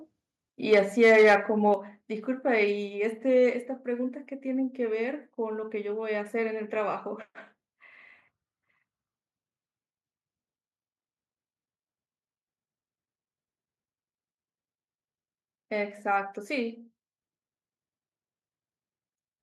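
From 0.72 to 1.35 s the loudest syllables turn harsh and crackly, likely microphone overload. Peaks drive about 5 dB past the converter's limit and their tops are sheared flat, so the sound is gritty crackle rather than the smeared, watery texture of codec distortion. At 0.74 s speech and background drop together by about 2 dB, likely the microphone volume stepped down by the call software. It arrives as a single abrupt step, not a gradual fade. A briefer crackle from 1.67 to 1.69 s is likely overload again, just reaching the limit. At 1.74 s a second step down of about 4 dB follows, likely the software cutting input volume once more.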